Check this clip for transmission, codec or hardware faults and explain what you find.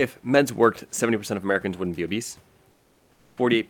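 One transmission fault is audible. From 2.71 to 3.37 s, after "wouldn't be obese", comfort noise replaces the background. Opus discontinuous transmission likely halted the audio there. Synthetic noise filled the gap. The room noise turns flat and featureless, about 7 dB quieter.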